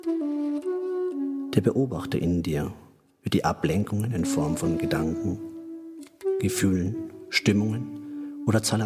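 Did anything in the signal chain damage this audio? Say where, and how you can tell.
No, nothing in the signal chain damaged this audio that I can hear.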